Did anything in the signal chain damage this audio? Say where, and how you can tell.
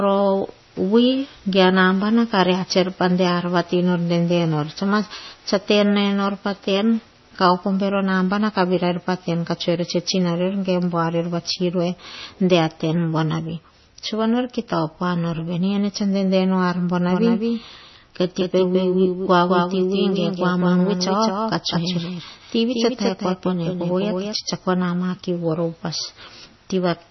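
Yes. Throughout, the speech sounds watery and swirly, with a metallic chirp on s sounds, consonant attacks smeared, and nothing above about 5.9 kHz. That hard treble ceiling and the flickering texture point to the codec stage, likely MP3 compression at a very low bitrate, around 24 kbps. Starved of bits, the encoder discards everything above a fixed cut-off and drops weak frequency lines that switch in and out from frame to frame.

From 17.10 s to 24.34 s, a second copy of the speech runs about a fifth of a second behind the first, roughly 5 dB quieter, full-band and with no room decay. It appears and disappears abruptly at those times. This is a doubled audio track, likely from the same signal being captured again through a slower path or left in as an out-of-step duplicate during editing. An echo or reverb would decay and colour the sound, but this copy stays dry and then cuts off cleanly.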